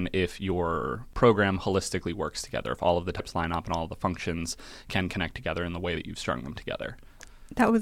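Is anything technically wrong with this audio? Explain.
Yes. The speech carries two brief faults from damaged data in a compressed stream, at about 3.18 s, between "if all of the" and "line up and all", and at about 5.95 s, between "together in the way" and "that you've strung them". Corrupted bytes in the encoded stream made the decoder misread those frames and lose sync until it found the next valid frame header. Each is heard as a short chirp, squawk, click or hole lasting under 20 ms.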